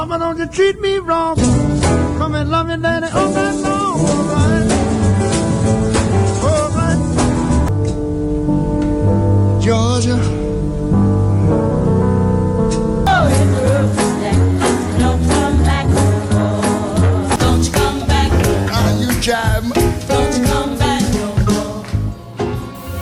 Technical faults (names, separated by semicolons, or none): none